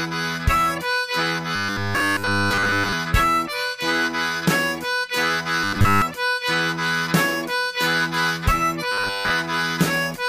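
Audio likely arriving too seldom, with the gaps filled by replaying a roughly 10 ms buffer, causes robotic sound from repeated short buffers at 1.56–2.93 s (almost entirely repeats), then 5.64–6.02 s and 8.92–9.31 s (mostly repeats). Each stretch becomes a rigid, metallic 100 Hz buzz.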